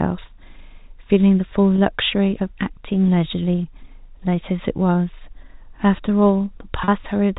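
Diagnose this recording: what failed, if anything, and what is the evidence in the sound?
Packet loss with pitch repetition at the network stage: 20 ms went missing at 1.76–1.78 s and 40 ms at 6.84–6.88 s, fitting one then two lost packets. The receiver bridged each gap by repeating the last pitch period, heard as a brief held, buzzy sound.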